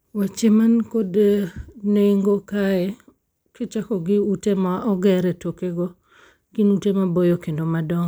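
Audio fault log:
No faults detected in this speech recording.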